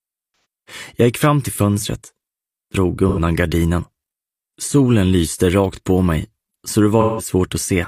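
AAC frame loss with concealment appears at 0.32, 3.08 and 7.00 s. It lasts about 128, 85 and 171 ms, fitting several lost frames. Each time the decoder improvises from the last good spectrum, giving a smeared, noisy patch that shows on a spectrogram as blurred, featureless energy.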